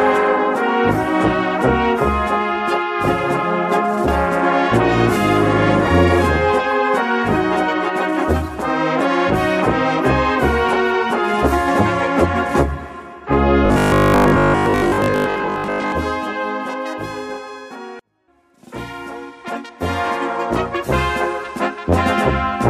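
From 13.66 to 15.92 s the sound turns into a rigid, metallic buzz at 50 Hz: robotic sound from repeated short buffers. It's likely caused by late audio, with a 20 ms chunk looping in place of most of the real signal.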